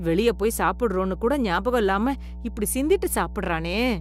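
Mains hum runs through the whole speech clip, from start to finish, as a steady low tone at 60 Hz with some weaker low harmonics above it. Power-line current is leaking into the signal path, most plausibly through a ground loop between connected equipment or from a transformer sitting close to the cabling. The hum is prominent, roughly 10 dB below the speech, so it sits as a constant drone underneath and fills the pauses between phrases.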